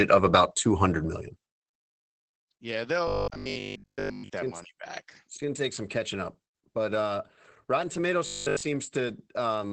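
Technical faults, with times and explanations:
Throughout: Opus voice compression. Nothing survives above about 8 kHz, and the speech sounds muffled and slightly hoarse, with plainly audible coding damage. This points to Opus running in its SILK linear-prediction mode at a wideband setting, at a low bitrate of around 12 kbps with 20 ms frames. At that rate the excitation signal is coded coarsely, which roughens the voice and gives it a faintly synthetic edge.
3.08–4.30 s and 8.27–8.63 s: robotic sound from repeated short buffers. In both stretches the speech turns into a rigid metallic buzz at 50 Hz that still roughly follows the words. The likely cause is audio arriving too late, so the player fills the gap by looping the last 20 ms block, which fits a 50 Hz repeat rate. Most of the first stretch and essentially all of the second are repeated fill rather than real audio.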